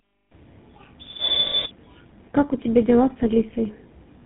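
Tandem speech coding runs throughout: the speech was re-encoded through roughly three codecs in a row, likely CVSD then GSM full rate twice. It sounds rough, warbly and muffled, with nothing above 3.9 kHz.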